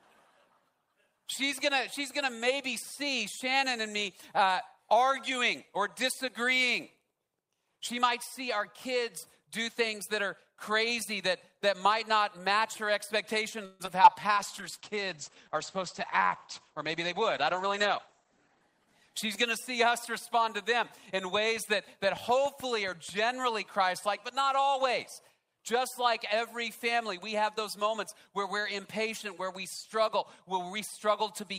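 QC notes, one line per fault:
13.65 to 13.82 s, call audio freeze: the sound stalls for about 140 ms and the last bit gets stretched into a fading buzz or hiss before things pick up exactly where they left off. Nothing's lost, it's just a pause inserted, likely packets held up in transit draining the jitter buffer.
13.86 s and 14.03 s, short concealed packet loss: two quick blips where about 20 ms each never arrived in time. The receiver papers over them by extending the preceding sound and blending back, so you get a tiny smear rather than a hole.
14.37 to 20.16 s, call bitrate drop: the encoder gets squeezed from 32 kbps to 11 kbps, bottoming out for about 4 seconds. Audio goes rougher and more watery, and the top end gets chopped from 20 kHz down to 8 kHz, so it sounds muffled until recovery.
16.14 to 18.87 s, jitter buffer speed-up: the buffer's holding extra audio, so the receiver trims out small pitch-period chunks repeatedly, about 100 ms in total. 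Playback runs around 4% fast at unchanged pitch.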